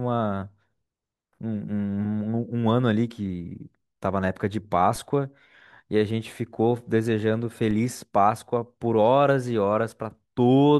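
At 4.96 s and again at 7.71 s the speech carries a DC step: the waveform's zero line suddenly shifts by about −28 dBFS, as if an offset had been switched into the signal path. Each jump is heard as a brief low thump, and the offset then drains away as a 20 Hz high-pass pulls the baseline back. Unlike a dropout or a digital click, nothing is lost from the speech; it carries straight through both thumps.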